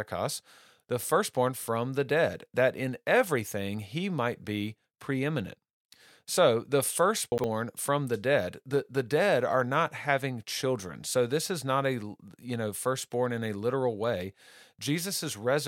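Chunks out of order at 7.32 to 7.44 s, just before "from the dead the": a 60 ms chunk arrives one chunk late and plays after the chunk that should follow it. Nothing is lost, but the swapped order sounds like a brief jumbled stutter across three hard joins.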